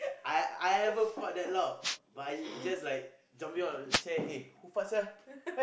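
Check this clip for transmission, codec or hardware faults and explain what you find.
Two wireless microphone noise hits show up in this speech, one from 1.81 to 1.97 s and another from 3.89 to 4.03 s. Each lasts well under a fifth of a second. They sound like a quick swish of static washing over the voice. That's the analogue FM radio link fading for a moment as reflected signals cancel the direct one. The receiver loses its grip on the carrier, so its own noise jumps up and masks the speech until the signal recovers.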